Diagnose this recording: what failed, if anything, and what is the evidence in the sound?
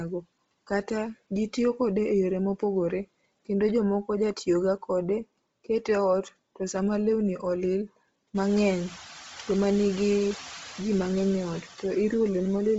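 Call processing is where the first fault sits: noise suppressor artifacts run through the whole recording. The background is pulled down by about 18 dB in the gaps between phrases, then swells back up beneath the speech. This gets more obvious once the room noise rises by about 16 dB, at roughly eight and a half seconds. A simple gate would mute everything at once. Here the reduction works band by band, frame by frame, which produces the uneven residue.

The second fault belongs to the codec stage and is consistent with Bluetooth LC3 compression throughout. The audio stops at 7.7 kHz, and the upper part of the band sounds grainy and breathy rather than merely dull, as if the missing detail had been replaced with shaped noise. That filled-in, gritty top is what separates it from a plain low-pass or resampling limit, which would leave a clean, muffled edge. The heavy damage fits a low-bitrate setting near 24 kbps with 7.5 ms frames, and this is most likely an LE Audio link.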